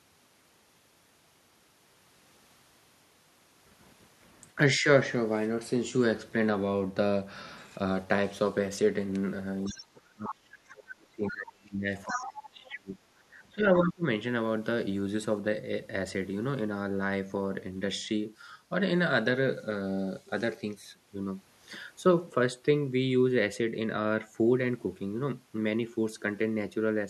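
At 9.65 to 9.85 s a faint second voice, about 20 dB below the talker, surfaces: the other side's voice leaking through, likely residual loudspeaker echo the canceller missed. On a spectrogram it appears as a weak, separate harmonic stack beneath the main speech.

From 9.69 to 11.89 s the talker's speech is suppressed in double talk, dropping by as much as roughly 30 dB. The canceller likely mistook simultaneous talk for echo and attenuated everything. The waveform envelope sags.

Between 12.05 and 13.67 s a second dip, around 25 dB deep, pulls the speech down again. Within it, leaked far-end voice reappears at 12.07 to 12.26 s, nearly as loud as the talker at about 5 dB below, and at 12.65 to 12.75 s, about 15 dB down.

A further leak at 13.76 to 13.92 s, about 15 dB below the talker, is followed by a brief suppression from 13.83 to 14.03 s, dropping around 30 dB. It appears as a short notch in the envelope.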